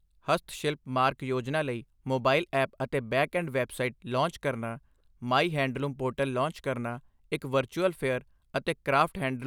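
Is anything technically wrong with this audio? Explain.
No, there's nothing technically wrong with this speech recording.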